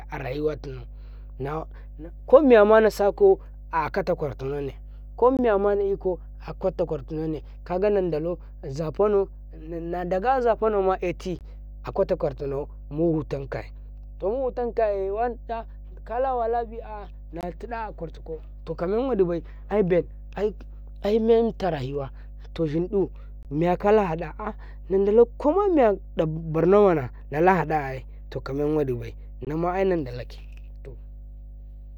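A steady 50 Hz mains hum runs under the speech throughout, about 15 dB below it, from a ground loop or a transformer coupling power-line current into the signal. Gaps between chunks appear at 5.37–5.39, 11.39–11.41, 17.41–17.43, 23.43–23.45 (after "rayuwa to shin ƙu") and 29.45–29.47 s (between "haɗa ai tokamen wadibai" and "nama ai"). These are hard-edged 20 ms silences every 6 s at the joins between chunks.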